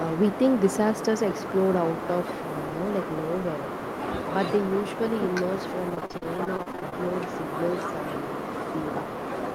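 From 5.89 to 6.94 s the speech suffers repeated packet loss (robotic sound). Audio data went missing or arrived too late, over and over, in quick succession. More than a dozen short gaps, the longest about 40 ms, were papered over by stretching the preceding sound, about 314 ms of fill in all, roughly a third of the stretch. A further 280 ms is simply gone, so the speech turns choppy and mechanical, with fragments dropped out.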